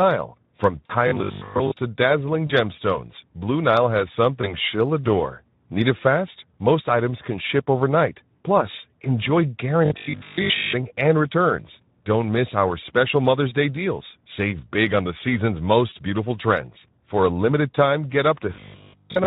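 Speex codec damage runs through the whole speech clip, at a rate that fits roughly 11 kbps. With so few bits for the excitation, the voice comes out hoarse and grainy, and what little sits above 8 kHz is a shaped noise rather than real detail. The coding damage is plainly audible from start to finish.

VoIP packet loss concealed by the speech codec first appears at 0.85 to 0.94 s. About 40 ms of audio is missing, which fits two lost 20 ms frames. The decoder carries its last pitch and filter forward at falling gain, so the sound smears into a brief fading tone or noise. The voice stays weak for a moment after real audio resumes.

At 1.08 to 1.74 s the voice turns into a rigid metallic buzz locked at 50 Hz that still roughly tracks the speech. This is likely robotic sound from repeated short buffers. Audio arrives too seldom, so a 20 ms slice is replayed over and over while most of the real signal in this stretch is skipped. 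The repetition rate sets the fixed buzz pitch.

The same concealment smear returns at 2.47 to 2.53 s and 4.41 to 4.54 s, each fitting a single lost 20 ms frame. The 50 Hz robotic buzz recurs at 9.85 to 10.73 s. A final single-frame concealment falls at 15.89 to 15.93 s, and the buzz comes back once more from 18.54 to 19.26 s, running to the end.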